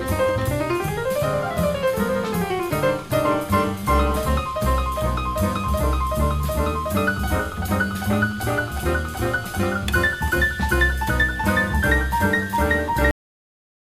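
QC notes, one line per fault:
13.11 s: cut-off end. The audio stops abruptly mid-sound at 13.11 s and drops straight to digital silence for the remaining 0.74 s, with no decay or fade of any kind. The final stretch of buffers was never written to the file or played, so whatever was sounding is truncated at an arbitrary point rather than allowed to finish. That is why the ending sounds chopped instead of trailing away naturally.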